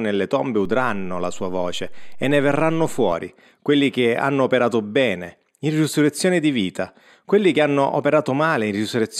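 A speech recording with a DC step. At 0.65 s, just before "quelli che hanno operato", the waveform's zero line jumps to an offset of about -28 dBFS. The step is heard as a low thump or click. The offset lasts until 3.12 s. The speech itself carries on unchanged through it. The cause is a shift in the signal's baseline, as when a converter recalibrates or an offset input is switched in.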